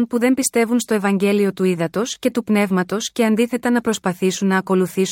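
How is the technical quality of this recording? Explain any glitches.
Nothing here trips me up: I hear no glitches anywhere in this speech recording, so there's nothing to explain.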